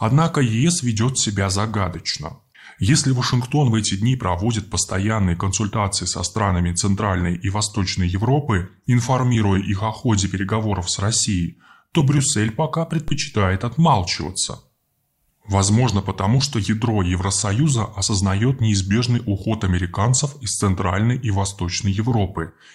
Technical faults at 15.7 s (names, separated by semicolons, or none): none